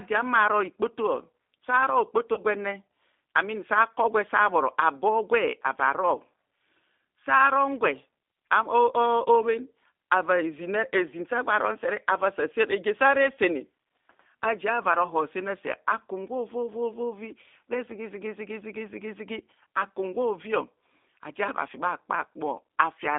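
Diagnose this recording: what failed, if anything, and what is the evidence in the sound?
G.729 codec damage runs through the whole recording, at the codec stage. The speech sits in a narrow line band from about 250 Hz to 3.6 kHz, with nothing above. It has the plainly audible rough, slightly synthetic texture of a low-rate model-based coder, which fits 8 kbit/s G.729A. The decoder does not carry the waveform itself. It rebuilds each 10 ms frame from a vocal tract filter, a pitch predictor and a handful of pulses, so fine detail is lost.

VoIP packet loss concealed by the speech codec occurs from 2.34 to 2.41 s, a network-stage fault handled at the decoder. About 30 ms of audio went missing, consistent with a single lost packet. The decoder filled the gap by extending its last pitch and filter settings at falling gain, so the speech is briefly stretched into a fading buzzy or noisy sound. 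Because each frame is predicted from the one before, the distortion lingers until about 2.41 s, after the missing stretch has ended.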